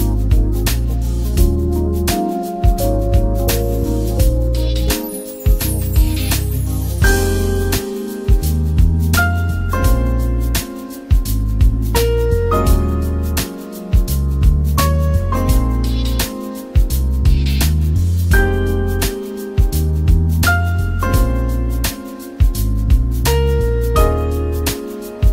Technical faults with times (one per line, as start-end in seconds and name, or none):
none